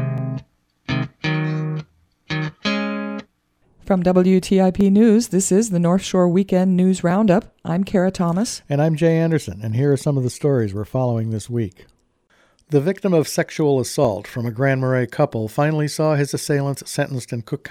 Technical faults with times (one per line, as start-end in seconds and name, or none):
0.18-16.36 clock drift buffer slips